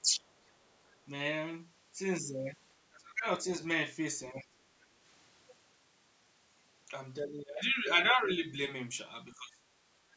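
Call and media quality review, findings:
Speech suppressed in double talk: talker level dips sharply at 0.01–0.27 s, 2.91–3.26 s, 4.32–4.90 s, 7.20–8.19 s, 8.39–8.59 s and 9.36–9.63 s. The dips are mostly about 20 to 25 dB deep, and the one at 8.39 s is only a few dB. The longest hit runs through 7.20–8.19 s. The likely cause is the echo canceller failing to separate near-end speech from loudspeaker echo and attenuating both. On the waveform, the envelope collapses in chunks. On the spectrogram, harmonics fade or vanish in blocks below the 8 kHz ceiling.

Other side's voice leaking through: a faint second voice is audible at 0.73–0.97 s, roughly 35 dB under the talker. The likely cause is residual far-end echo that the canceller did not fully remove from the microphone path. On the spectrogram, weak extra harmonic traces run under the main speech. The waveform barely shows it at that level.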